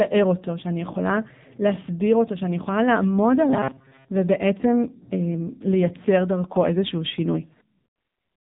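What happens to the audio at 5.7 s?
At 5.7 s the speech is still passing through AMR narrowband mobile codec coding, as it does for the whole clip. The codec rebuilds each 20 ms frame from a vocal-tract model excited by a few pulses, and the damage here is heavy, which points to a low mode near 6.7 kbps. Nothing above 3.8 kHz survives, so the speech sounds dull and telephone-thin, with a buzzy, synthetic edge.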